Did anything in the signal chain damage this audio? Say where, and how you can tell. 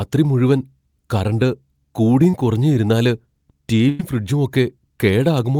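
Yes, the network stage. Around 2.30 to 2.34 s, just before "കുറഞ്ഞും ഇരുന്നാല്", there's a brief smear: short concealed packet loss. About 30 ms never arrived, and the receiver stretched the preceding sound over roughly 27 ms before blending back into real audio.

The second hit is also network: a burst of packet loss from 3.89 to 4.00 s. About 100 ms went missing in a row. The decoder kept extending the last sound while fading it, so you get a held buzz or hiss, then the speech jumps ahead.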